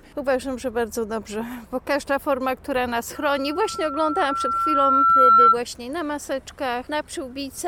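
The audio has a loudspeaker feedback squeal from 3.15 s to 5.58 s: a single tone at 1.4 kHz that swells over roughly two seconds until it sits around ten decibels above the rest of the sound. A microphone is picking up the loudspeaker it feeds, and at that frequency the loop gain exceeds one, so the tone keeps feeding on itself. Unlike an interfering whistle or test tone, which arrives at a fixed level, this one grows out of nothing.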